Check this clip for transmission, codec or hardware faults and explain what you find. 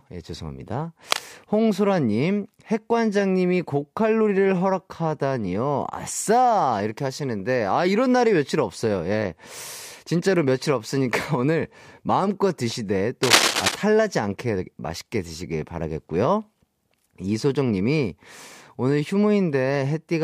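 Cable scratch noise appears twice, from 1.11 to 1.29 s and from 13.23 to 13.75 s. A worn connector or cable being moved is the likely cause, its contact resistance jumping about and injecting rough bursts of noise. The result is a scratchy rustle, slightly below the speech at first and louder than the speech in the second, longer burst.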